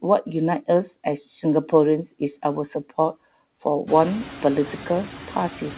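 Throughout the speech, the background noise dips between phrases and swells back beneath them. These are noise suppressor artifacts: the suppressor pulls down bands it judges to be steady noise, here by about 5 dB, frame by frame. The room noise rises by about 17 dB around 4 s, within a band capped at 4 kHz.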